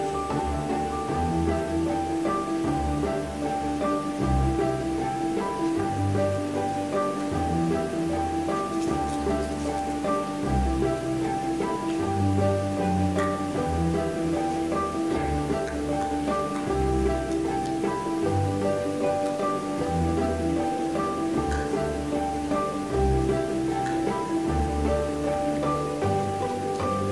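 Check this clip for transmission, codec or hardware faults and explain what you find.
Nothing here points to a transmission, codec or hardware fault. No dropout, distortion or interruption can be heard at any point in the audio.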